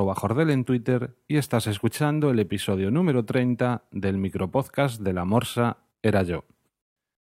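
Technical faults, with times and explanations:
Nothing stood out on listening to the speech recording.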